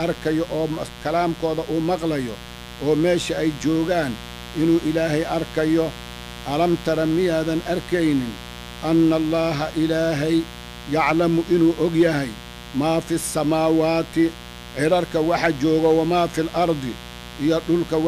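From start to finish, a mains buzz sits under the sound. It is steady and raspy, not a smooth hum. The buzz is built on 60 Hz mains. Something like a dimmer, a rectifier or a missing shield lets sharp switching spikes into the signal twice per cycle. Those spikes carry harmonics of 60 Hz up to several kHz. The buzz sits roughly 15 dB below the wanted sound.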